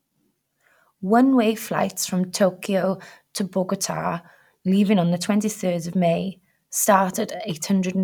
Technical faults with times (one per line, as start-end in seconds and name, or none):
none